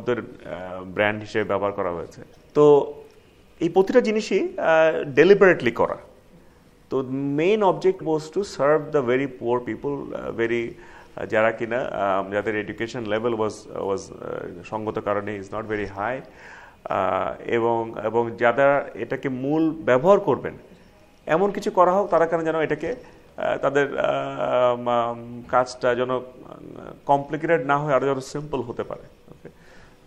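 At 2.31 s a short blip cuts through the sound. It lasts until about 2.37 s. A second, matching blip runs from 7.96 to 8.01 s. Both come from damaged data in a compressed stream. Some bytes in the encoded file were lost or corrupted there. The decoder misread those frames and lost its place. It then hunted for the next valid frame header. Each failure is brief, roughly 50 ms long.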